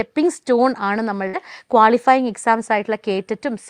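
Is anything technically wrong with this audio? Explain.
Yes. A burst of packet loss at 1.27 to 1.36 s drops 60 ms. The receiver prolongs the previous sound, fading it, rather than cutting to silence as a plain dropout would.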